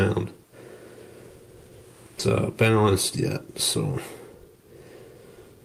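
A skip ahead occurs at 2.19 s. Around a second of audio never reaches the listener: that stretch was discarded, either lost in transit or thrown out by an overflowing jitter buffer, while later material was already queued. Nothing fills the hole, so the sound on either side is butted together with no gap, and the audio abruptly jumps forward. Playback ends up roughly one second closer to live than before the cut.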